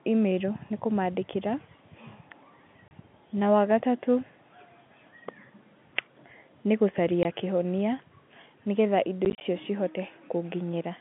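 Packet loss filled with silence cuts 30 ms holes at 2.88 s, 20 ms at 7.23 s, and 70 ms scattered across 9.25–9.41 s, which fits 10 ms packets. Missing audio was replaced by silence. The waveform drops flat, showing blank vertical stripes spectrally.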